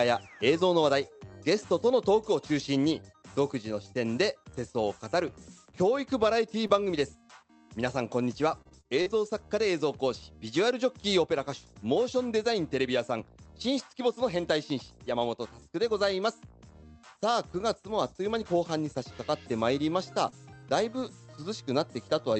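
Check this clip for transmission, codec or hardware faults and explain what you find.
Three kinds of transmission fault are audible, all packet-level losses on a call path that band-limits the audio to about 8 kHz, consistent with an Opus call codec.

Scattered short gaps occur between 4.65 and 9.08 s. Roughly seven separate packets go missing across this stretch, the longest lasting about 50 ms, and altogether about 200 ms is filled in, around 5% of the span. At each hole the receiver extends the preceding sound and then blends back into the real stream. The audio stays clear between the gaps, with brief ticks, smears and hiccups wherever a gap falls.

A short concealed packet loss runs from 20.30 to 20.34 s. About 20 ms never reached the decoder in time, and the receiver synthesised roughly 21 ms to cover it by continuing the last sound, pitched if voiced and shaped noise if not, before crossfading into the next real audio. 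It comes through as a single brief smear or wobble, short enough that a quick transient at that moment could be lost entirely.

Lost packets rebuilt from error correction appear at 20.32, 20.62, 20.98, 21.06 and 21.42 s, each covering 20 ms. In every case the following packet carried a low-bitrate duplicate of the missing one, Opus in-band forward error correction, so there is no gap. The decoder plays that coarser copy instead, and each of these frames sounds momentarily grainier and noisier than the audio around it.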